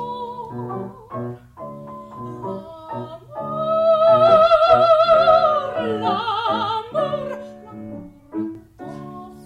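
From 7.34 to 8.55 s the sound turns hollow and phasey: channel delay (comb filtering), one channel lagging roughly 10 ms, so mono summing cuts evenly spaced notches from about 50 Hz.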